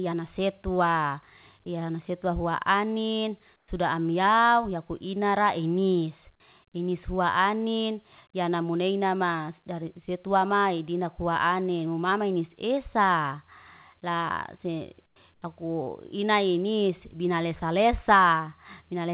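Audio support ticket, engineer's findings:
Comfort noise in place of the background, three gaps in speech. Likely cause: sender's voice detector dropping into discontinuous transmission, receiver synthesising noise in place of the real background. Result: background detail swapped for flat, featureless hiss, each time quieter than the real floor. 3.56–3.68 s, 120 ms, about 2 dB down. 15.06–15.16 s, 100 ms, about 14 dB down. 15.34–15.42 s, 80 ms, about 8 dB down. Narrowband call path, nothing above 4 kHz, fits G.711.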